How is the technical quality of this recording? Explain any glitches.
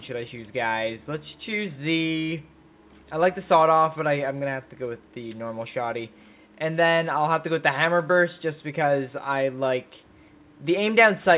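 Nothing stood out on listening; the recording has the narrow, telephone-band sound of a call line, with nothing heard above about 4 kHz, and no glitches to explain.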